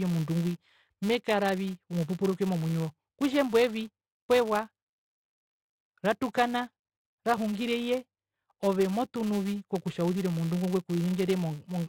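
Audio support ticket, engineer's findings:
Buzz at 200 Hz across the whole speech clip, riding the signal level: louder on strong syllables, gone in pauses. Probable component: a filter stage restarted on every block. It loses its state at each boundary and starts from silence, leaving a small transient every 5 ms, which points to a 5 ms processing block. Unlike mains hum or a ground loop, it disappears with the signal and doesn't persist at a fixed level.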